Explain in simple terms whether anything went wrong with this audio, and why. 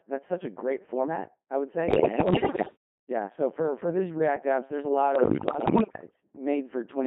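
The whole clip sounds robotic and buzzy, as if a machine were imitating a person, and it is squeezed into a narrow, telephone-like range. This is the Codec 2 vocoder, a very low-rate system used on digital radio. Rather than sending the actual sound wave, it sends a rough description of pitch, loudness and tone, and the receiver rebuilds the voice from simple tones. That rebuilding is what gives the speech its synthetic buzz.

Twice, from about 1.9 to 2.8 seconds and again from about 5.2 to 6.2 seconds, the speech falls apart into bleeps, warbles and gibberish, with sudden jumps in pitch and loudness. These are bit errors on digital voice radio. Roughly one bit in ten arrived flipped, as happens at the edge of radio coverage. Because each bit sets the pitch, level or tone of a whole short slice of speech, those errors scramble the rebuilt voice outright.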